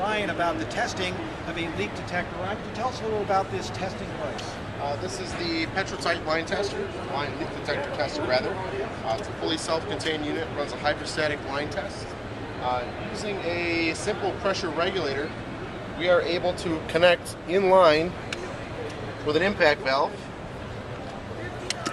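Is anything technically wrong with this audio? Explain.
No, there are no faults.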